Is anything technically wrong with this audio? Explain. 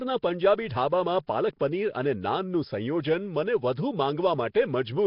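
Yes. Throughout, the speech sounds rough and hissy, smeared and underwater, with nothing above 5.3 kHz. This is likely heavy Nellymoser compression, consistent with roughly 22 kbps.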